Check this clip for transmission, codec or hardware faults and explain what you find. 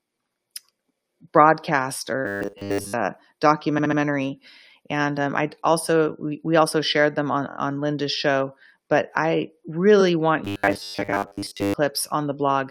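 Two kinds of fault are present: a robotic buzz in two stretches of the speech, and three short stutters from repeated frames.

From 2.26 to 2.93 s, the speech turns into a rigid, metallic drone pitched at 100 Hz while still loosely tracking the syllables. This is likely robotic sound from repeated short buffers. Audio arrived too slowly, so a 10 ms slice was looped over and over, and most of the real signal was skipped.

From 3.77 to 3.98 s there is a stutter. A 69.7 ms chunk plays three extra times. These are repeated frames: the same compressed frames were decoded again, adding about 209 ms.

From 7.49 to 7.56 s, just after "also shared them on", a brief 23.2 ms block repeats three more times as a quick rattle. The repeated frames add about 70 ms.

From 10.00 to 10.02 s, a single 23.2 ms frame plays once more, heard as a tiny hiccup. It is a repeated frame that adds 23 ms.

From 10.45 to 11.74 s, the same 100 Hz metallic buzz returns over the speech. 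Again a short buffer was likely looped in place of late audio, overwriting most of the original signal.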